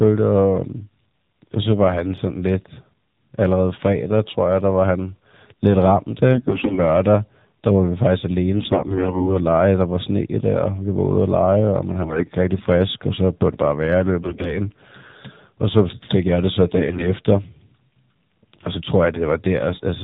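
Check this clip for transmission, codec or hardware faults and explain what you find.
Two faults are present: AMR narrowband mobile coding throughout, and AMR bit errors in five bursts.

AMR narrowband mobile codec: the whole clip is band-limited to 4 kHz and sounds buzzy and synthetic, pointing to the low 7.4 kbps mode rather than simple low-pass filtering.

AMR bit errors: at 6.32–6.80, 8.56–9.34, 12.02–12.30, 14.22–14.58 and 16.78–17.12 s, corrupted pulse and gain data turns the speech hoarse and gargly. Pitch and level hold, unlike dropouts.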